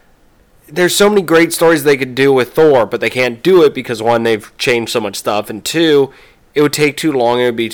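Hard clipping runs through the whole speech clip: the signal was driven about 10 dB beyond what a stage in the chain could pass, so a few percent of samples hit the ceiling and were flattened, adding high harmonics heard as harsh fuzz on every louder syllable.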